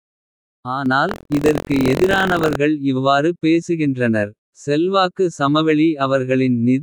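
At 0.86 s the speech and its background noise both step up by about 6 dB at once, and stay louder to the end. This sudden gain jump is likely a gain change applied without a ramp. The matched rise in noise separates it from a speaker simply talking louder.

From 1.07 to 2.56 s a robotic buzz at 43.1 Hz rides on the speech. This is buffer tearing, which fits a 1024-sample buffer: a small slice of each period replays audio from about a tenth of a second earlier, with hard joins. Unlike dropout stutter, nothing goes silent.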